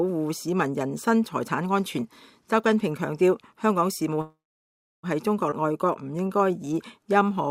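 At 4.21 s the sound stalls in what's heard as a call audio freeze. The last bit of audio carries on briefly as a fading buzz or hiss, then it's silent for roughly two thirds of a second before picking up again at 5.06 s. The likely cause is packets held up in transit so the jitter buffer ran dry. About 0.82 s of filler gets inserted, but when things resume nothing's actually lost. It's just a hole pushed into the timeline.

Right after, around 5.51 s, there's a skip ahead. Playback jumps forward with barely a seam, only a few milliseconds joining the two sides, and something like four tenths of a second of audio simply isn't there. That fits the receiver dumping a backlog: all that delay from the freeze had stacked up later audio, so it threw away a chunk to catch up, and you hear the two edges butted together.

From 5.62 s to 7.49 s you get a jitter buffer slow-down. The buffer was running low or had just raised its target delay, so the receiver padded it out by repeating tiny slices, single pitch periods and bits of pauses, over and over. 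Pitch stays put, but everything runs at about 92% speed, roughly 160 ms stretched in, so sounds come out drawn-out.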